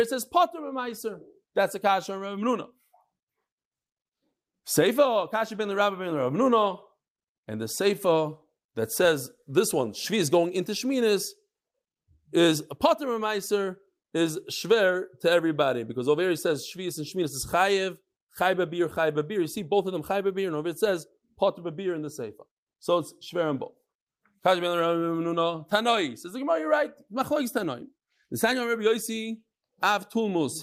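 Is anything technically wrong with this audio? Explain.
No, the speech signal comes through without any audible technical fault.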